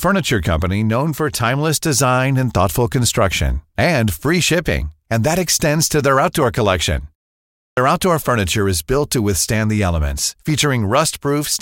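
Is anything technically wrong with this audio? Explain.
Yes. A clipped start after a pause occurs at 7.71 to 7.77 s. It follows a silence of 0.64 s. The output device has not fully woken when sound resumes. About 62 ms is swallowed. "outdoor furniture is built" starts abruptly, without its first sound.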